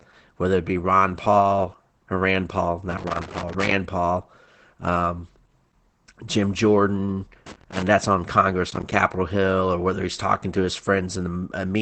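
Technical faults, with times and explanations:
Throughout: Opus voice compression. A low-rate SILK coding at 12 kbps discards everything above about 8.6 kHz and quantises excitation coarsely, so the speech sounds plainly muffled, hoarse and faintly robotic.
2.90–3.72 s and 7.46–7.87 s: loose connector crackle. A worn contact rapidly makes and breaks, chopping the signal into irregular bursts of scratchy crackle.
8.71–8.96 s: processor overload crackle. The processor misses about ten buffer deadlines in quick succession, consistent with roughly 10 ms buffers, each leaving a hard-edged silent gap, heard together as a burst of crackle riding on the speech.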